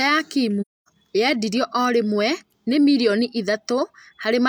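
Speech, with one AAC frame loss with muting from 0.61 to 0.88 s. For roughly a quarter of a second the sound fades out, stays silent, then fades back in, which points to a run of six consecutive frames going missing. The decoder filled each lost frame with a zeroed spectrum, and the overlapping transform windows of the neighbouring good frames taper the level down and up across the boundaries, so the gap has soft edges.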